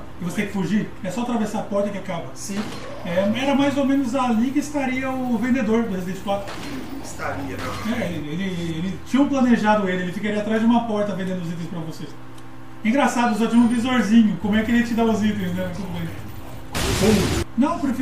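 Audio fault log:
No faults detected; nothing to log.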